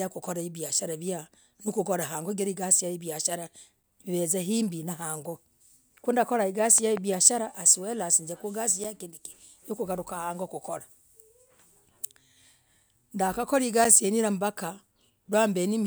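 A speech clip with two kinds of fault. A gap between chunks appears at 3.83, 8.84 and 13.85 s: brief 7 ms holes, spaced exactly 5 s apart. That regular spacing and the silence inside each hole mark them as chunk joins rather than clicks. A loud pop runs from 6.78 to 6.99 s as two sharp hits, roughly 10 dB above the speech, with the speech carrying on underneath. It is likely an electrical transient such as a plug, switch or static discharge, and it adds energy on top of the speech rather than cutting it out.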